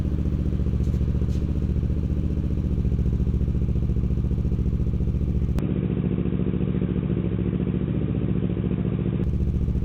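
Input switched to a poorer device, from 5.59 s to 9.24 s: the sound abruptly turns dull and boxy, with nothing above 3.8 kHz, and stays that way until it clears again at 9.24 s. The change happens without any gap and with the level staying roughly the same, but a faint new noise floor appears, far below the signal. This points to the recording likely having moved to a narrower-band microphone or a headset's call profile for that stretch.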